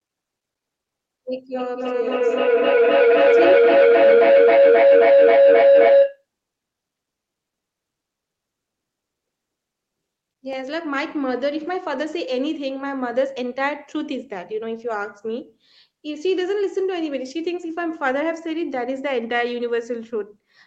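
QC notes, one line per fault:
1.5–6.25 s, feedback howl: two devices in the room share the call, so each microphone-to-loudspeaker trip adds gain. Repeats swell rather than fade, narrowing to a tone near 500 Hz over a loop delay of roughly 300 ms, and peak about 10 dB above the speech.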